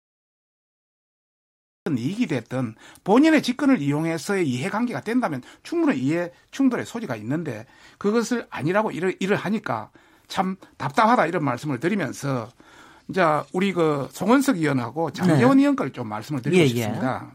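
Speech opens with digital silence until 1.86 s, then begins abruptly mid-sound with no natural attack: a cut-off start, because recording or streaming began late.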